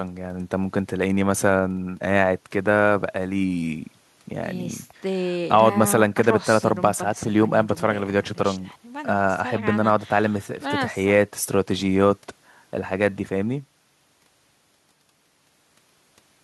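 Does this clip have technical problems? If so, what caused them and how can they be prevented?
No, nothing in this speech clip points to a technical fault, so there is no cause to trace and nothing to prevent.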